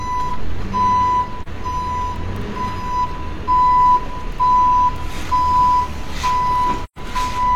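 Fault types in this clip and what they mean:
AAC frame loss with muting: missing compressed frames were replaced with silence, and the overlapping windows fade the audio out and back in. There are two soft-edged gaps, about 43 ms near 1.42 s, which fits one frame, and 128 ms from 6.84 s, which fits three.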